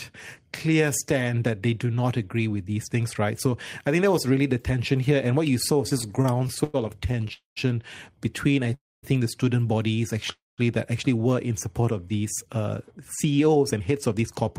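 Repeated stalls (stutter) run from 5.89 to 7.31 s, starting just after "what you saw was". Packets kept arriving late, so the jitter buffer emptied 15 times. Each time the receiver stretched the last bit of sound until data came back, filling about 259 ms in all, with the longest hold at 100 ms. Nothing is lost, but roughly a fifth of that stretch is filler, so the speech drags and judders.

Three call audio freezes follow, at 7.33 to 7.58 s, 8.74 to 9.05 s (just before "think the student bodies"), and 10.32 to 10.60 s (between "think the student bodies" and "that actually were in"). Each is a single longer hold, likely caused by packets held up in transit so the buffer ran dry. The last sound is carried on briefly and then fades. Of the 231, 286 and 258 ms inserted, about 140, 230 and 180 ms are silence. The speech then resumes where it stopped, each time later by the length of the gap.

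A jitter buffer speed-up covers 12.45 to 14.44 s. The buffer held more audio than it aims for, so the receiver repeatedly cut out short pitch-period-sized slices to catch up. Roughly 150 ms is trimmed away, and the speech plays at 108% speed with unchanged pitch, sounding hurried.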